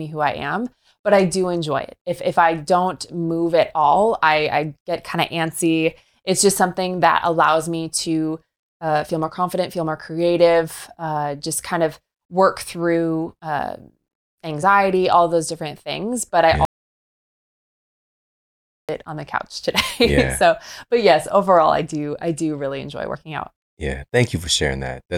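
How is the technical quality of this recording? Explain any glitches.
The recording has three glitches: two skipped compressed frames and one dropout to silence. At 14.62 s and 23.13 s, compressed frames are skipped. Roughly one frame of audio, which fits a 26.1 ms frame length, is jumped over. From 16.65 s to 18.89 s there is an audio dropout to silence lasting 2.24 s. The speech cuts to silence with no room tone, likely because the input was lost while silence was still written.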